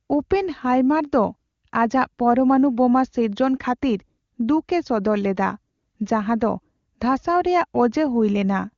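Nothing goes wrong anywhere in this speech, which comes through an AMR wideband (HD Voice) link at a quality that fits the codec's top 23.85 kbit/s rate, with the highs simply stopping at around 7.1 kHz, just as that codec is built to do.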